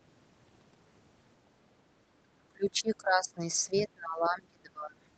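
From 2.23 to 3.4 s the speech sinks sharply, by roughly 25 dB at its deepest, then a brief dip of around 10 dB follows at 3.67 to 3.75 s, and from 3.94 to 5.01 s it falls away again by about 25 dB. This is speech suppressed in double talk, likely caused by an echo canceller mistaking the near talker's speech over overlapping far-end audio for echo and attenuating the near talker. These drops sit within the band-limited sound of the call path.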